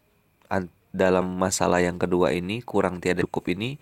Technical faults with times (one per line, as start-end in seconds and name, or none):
1.21-1.28 compressed frames skipped
3.21-3.27 compressed frames skipped